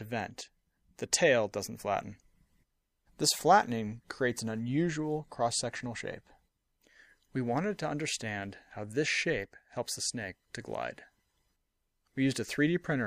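At 2.03 s and again at 9.98 s the sound skips forward, with about 30 ms missing and the two sides butted together without any silence. This is likely audio missing between chunks, with a short piece dropped while one 4-second chunk closed and the next opened. A waveform shows a sudden step where the shapes fail to line up, and a spectrogram shows a thin vertical seam with the patterns on each side not continuing across it.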